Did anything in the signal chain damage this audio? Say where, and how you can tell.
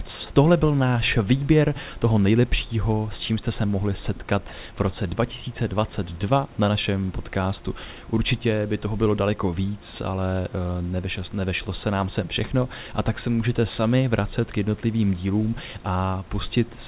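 Yes. Between "jste se mohli setkat" and "v roce", 4.48–4.52 s, speech briefly gives way to flat comfort noise: sound dropped by the voice detector, likely from call processing gating a quiet moment.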